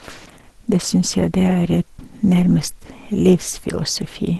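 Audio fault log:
throughout: Opus compression. The speech is muffled and hoarse, with plainly audible codec damage, and nothing above 12 kHz. That's likely Opus in its hybrid speech mode at a low bitrate, something near 16 kbps, trimming the top band.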